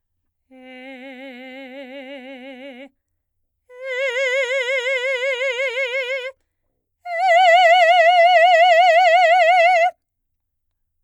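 No technical faults can be heard anywhere in this music clip. No dropouts, clicks, distortion or other glitches interrupt the audio at any point.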